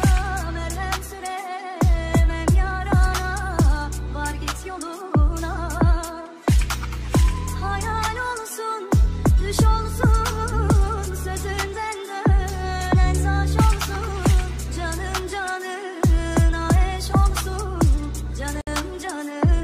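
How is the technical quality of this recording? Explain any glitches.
There's one glitch worth flagging, near the very end. At 18.61 s the sound drops out for about 60 ms, then resumes at 18.67 s right where it left off. That's a gap at a join of encoded pieces: two separately encoded chunks were stuck together untrimmed, so the encoder's start-up delay and last-frame padding left a short silence with smeared edges.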